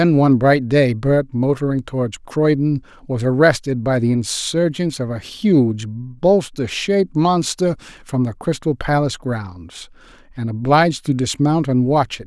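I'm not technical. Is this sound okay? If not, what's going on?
Yes, nothing in this speech recording points to a technical problem with the signal.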